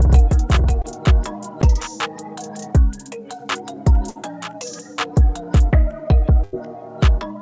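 From the start until 1.62 s a doubled audio track runs, a full-band copy at roughly equal level trailing by about half a second, likely from a second capture path; unlike an echo it has no decay and stops abruptly. At 0.82 to 0.85 s, short concealed packet loss smears about 20 ms into a brief wobble, shorter than the later gaps. Bursts of packet loss at 4.09 to 4.17 s and 6.43 to 6.55 s drop about 60 ms and 100 ms. Each sounds like a held, fading continuation before the audio jumps ahead, rather than a mere tick. Throughout, the call path leaves nothing above 8 kHz, which fits a G.722 codec.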